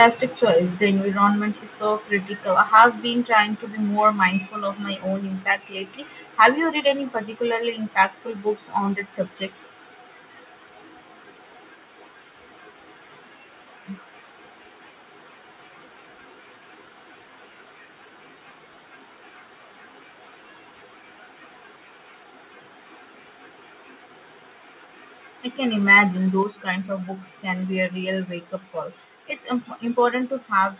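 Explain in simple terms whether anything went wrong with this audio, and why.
Harsh crackles at 0.0 to 0.05 s, 2.75 to 2.84 s and 6.42 to 6.45 s are microphone overload, most likely from the input set too loud. The loudest peaks get flattened, which is different from a simple dropout.

Sudden drops in loudness at 1.02 s, 3.06 s and 26.43 s are the microphone volume being stepped down, each a clean one-step fall rather than a gradual fade. The telephone-like dullness comes from the call connection, which carries nothing above 4 kHz.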